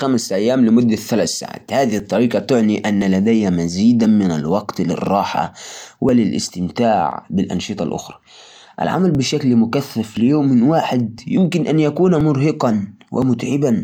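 From 0.98 s to 13.22 s the speech has periodic USB or driver dropouts. Every 1.02 s a few milliseconds of audio are skipped, leaving a small tick. Unlike random clicks, these ticks are strictly evenly spaced and vanish during pauses.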